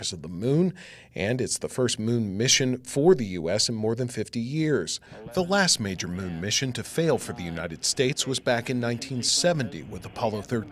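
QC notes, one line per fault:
8.13–8.19 s, one channel drops out: for about 60 ms the level falls abruptly by about 6 dB, then snaps back. The likely cause is one stereo channel briefly going silent, leaving the mono sum with half the shared content and nothing unique to that side.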